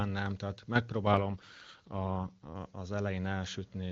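Right after "nem tehát", from 1.13 to 2.52 s, the speech turns rough and synthetic without any gap: an AMR rate drop, fitting a fall from 23.85 to 8.85 kbit/s.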